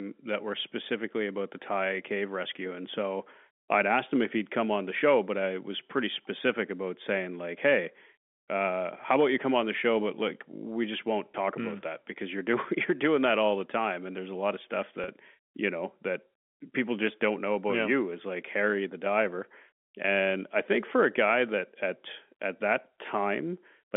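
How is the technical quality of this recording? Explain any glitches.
Two brief glitches interrupt the telephone-band speech, which is carried as G.711 with its roughly 250 Hz to 3.5 kHz line band. Packet loss with pitch repetition occurs at 11.33 s, after "like we just won't", and from 15.04 to 15.08 s, between "a lot of stuff" and "you know that people". The receiver bridged gaps of about 20 ms and 40 ms, consistent with one and then two lost packets, by repeating the last pitch period, which is heard as a momentary held, buzzy tone.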